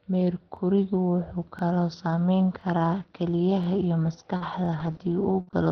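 A speech recording carried over a call path, with audio limited to about 6 kHz and the coding texture of Opus at a low bitrate, consistent with roughly 20 kbps. The first fault is overlapping chunks. Each chunk is 1.0 s long and begins 23 ms before the previous one ended. So a 23 ms slice plays twice at every join. This gives a stutter at 0.57, 1.59, 2.61, 3.64 and 4.66 s, evenly spaced one second apart. Next, at 4.37 to 4.43 s, there is a short stall from a late packet. The jitter buffer ran dry, and the receiver held the last sound for 39 ms until the packet arrived. Nothing is lost. The sound simply lingers with a faint buzz or dip, and the timing shifts by the same 39 ms. Around that stall and after it, several packets were lost and rebuilt from error correction. The next packet carried a low-bitrate copy of each, and the decoder played that copy instead of leaving a gap. These stretches sound rougher and noisier than their surroundings. 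They fall at 4.40 to 4.46 s (60 ms), 4.79 to 4.94 s (45 ms rebuilt, with 19 ms of padding), 4.84 s, 4.91 s, 4.94 to 4.99 s (45 ms), and 5.47 to 5.53 s (60 ms). Finally, at 5.41 to 5.50 s, a burst of packet loss removes about 60 ms of audio. The receiver stretched the last sound for 61 ms and let it fade into a held tail. The speech then resumes further on, with that piece missing.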